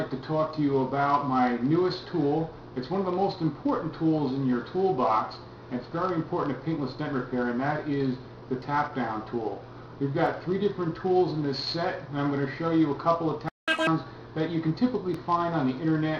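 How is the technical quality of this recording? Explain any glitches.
The recording has three kinds of glitch: two tiny dropouts, and a stall followed by a fast catch-up near the end.

Block of digital silence, at 10.26 s and 15.14 s: samples were zeroed for about 1.8 ms and then 0.27 ms, as when output buffers go unfilled in time. The signal drops to silence and jumps back with no fade, so each is heard as a tick. The waveform shows a flat line; a spectrogram shows a thin full-height vertical stripe.

Playback stall, 13.49 to 13.68 s: the sound halts mid-flow for about 190 ms before resuming. Most likely the player ran dry or its thread was blocked. It is heard as an abrupt gap with a hard stop and restart. On the waveform, a flat line about a fifth of a second long sits between two abrupt edges. The spectrogram shows a clean empty column.

Catch-up at higher speed, 13.68 to 13.87 s: straight after the gap, the backlog is played at 2x speed to win back all of the lost time. 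Pitch jumps up by roughly ten semitones, giving a brief chipmunk-like rush. On a spectrogram, harmonics and features shift sharply upward and compress in time for about 190 ms. The waveform shows events packed tighter over that span.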